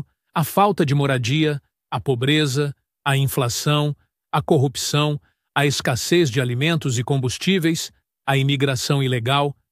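No technical faults can be heard anywhere in the signal; the audio stays intact and continuous for its whole duration.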